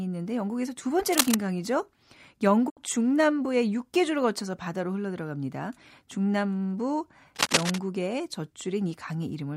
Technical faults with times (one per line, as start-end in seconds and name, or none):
1.12-1.34 cable scratch noise
2.68-2.79 digital broadcast dropout
7.35-7.80 cable scratch noise